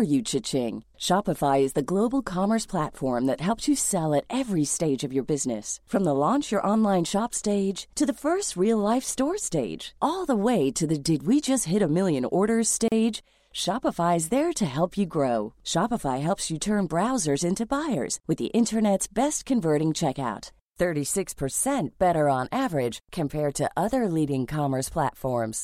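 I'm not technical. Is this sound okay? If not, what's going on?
No, there's one hiccup. At about 12.88 seconds, right after "hit a million orders," the speech drops out for a split second, roughly 37 milliseconds, and then picks up exactly where it left off. That's a gap at a join of encoded pieces: the recording was compressed in separate chunks and stitched together without trimming the bits of silence the compression adds at the start and end of each chunk, so a tiny hole gets left at the seam.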